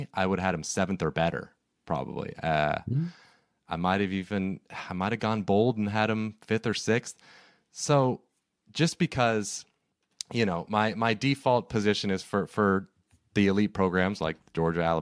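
A speech recording with nothing technically wrong with it.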